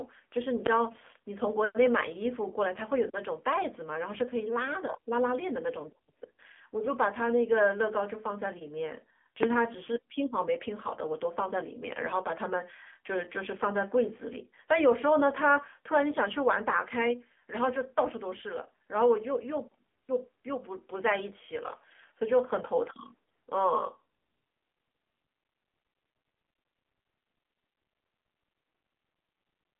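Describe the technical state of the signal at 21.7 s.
At 21.7 s you're hearing the AMR narrowband mobile codec, which runs through the whole clip. The speech is squeezed into a phone band of roughly 250 Hz to 3.4 kHz, with nothing above 3.5 kHz. A few coded pulses driving a vocal-tract model give plainly buzzy, synthetic damage, which fits a low rate like 7.4 kbps.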